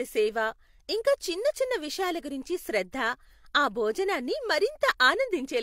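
Nothing in this speech recording stands out as a technical problem; it's a straightforward capture with no faults to report.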